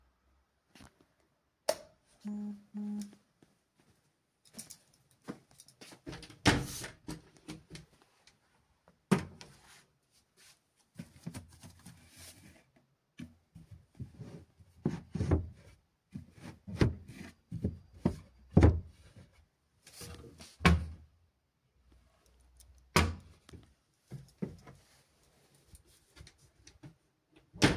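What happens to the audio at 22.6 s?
Nothing goes wrong at 22.6 s: the sound plays through that moment intact, with no audible fault.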